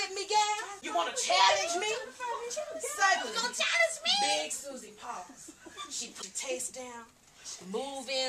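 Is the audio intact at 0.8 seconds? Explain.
No. From 0.77 to 0.83 s, about 56 ms, the clip has damaged data in a compressed stream: some bytes in that stretch of the encoded file are corrupted, so the decoder can't interpret those frames correctly. It loses its place in the bitstream and must hunt for the next valid frame header before decoding can resume. In the sound, that breakdown comes through as a short, harsh chirp or blip that cuts across the audio at that moment.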